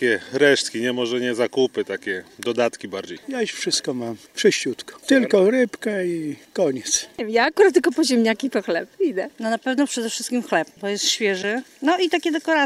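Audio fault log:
3.16 to 3.19 s and 11.41 to 11.44 s, broken MP3 bit reservoir: each time the audio skips forward and a brief glitch of about 30 ms takes its place. The frames are 24 ms long. The likely cause is frames dropped from the stream, so the next frame reaches back into the bit reservoir for data it had stored in earlier frames, finds bytes belonging to a different frame, and decodes the wrong data until valid frames resume.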